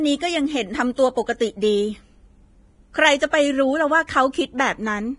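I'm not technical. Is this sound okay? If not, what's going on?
No. The speech sounds hissy and grainy, and the brightest sounds are missing above 10.6 kHz, likely from heavy Vorbis compression squeezing the file too hard. Pre-echo adds a brief hiss just before two sharp sounds, at 0.96 to 0.98 s and 3.31 to 3.33 s, because the compression smears noise ahead of sudden starts.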